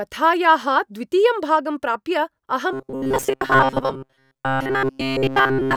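Robotic sound from repeated short buffers runs from 2.73 s to the end of the clip at 5.77 s. The speech collapses into a rigid, metallic buzz pitched at 133 Hz that still loosely tracks the words. This is likely a playback buffer being starved: the software kept replaying a slice of roughly 7.5 ms while fresh audio was skipped. About seventy percent of the stretch is repeated material.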